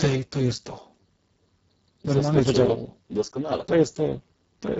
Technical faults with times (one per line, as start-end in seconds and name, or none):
0.00-4.79 Speex codec